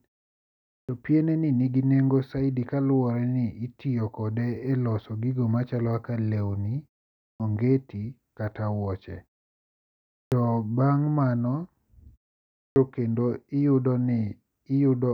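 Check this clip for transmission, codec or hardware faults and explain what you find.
Yes, there is one recurring fault: the start of speech is cut off after silences.

Clipped start after a pause, at 0.85, 7.36, 10.28 and 12.72 s. During pauses of 0.55 to 1.08 s the output device sleeps and needs 36 to 40 ms to wake. That swallows the first sound, so speech starts abruptly out of silence.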